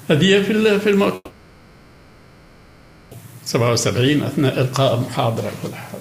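From 1.15 s to 3.16 s, the incoming stream most likely stopped arriving for about 2 s, a long network dropout, and the receiver had nothing to play for that stretch. It papered over the gap by stretching the last sound it had, so the audio smears into a fading buzz-like hiss that thins to near quiet, including a brief dead-silent moment of about 30 ms. Sound resumes at 3.16 s, with the missing two seconds simply gone.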